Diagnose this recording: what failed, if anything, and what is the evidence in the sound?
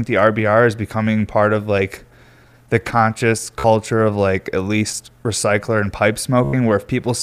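Bluetooth stutter on the wireless link. After "the conscious" (3.60–3.64 s) and "least recycler and pipe" (6.44–6.53 s), lost packets made the receiver buzz by replaying its last buffer.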